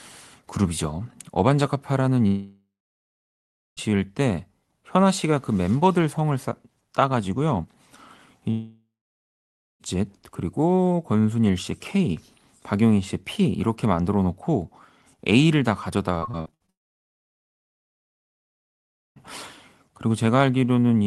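At 2.27 s the speech breaks off. A fading buzz continues the last sound, then silence holds until 3.79 s. About 1.5 s of audio is gone, likely from a long network dropout. The same happens from 8.51 to 9.82 s, losing 1.3 s, with roughly 0.9 s of silence.

From 16.18 to 16.70 s there is repeated packet loss, producing a robotic sound. Eight short gaps, the longest 60 ms, are patched by stretching the previous sound. Patches fill 42% of this span. The speech sounds choppy.

A long network dropout likely follows immediately, from 16.70 to 19.18 s. About 2.5 s is missing, and nearly all of it plays as silence before the speech returns.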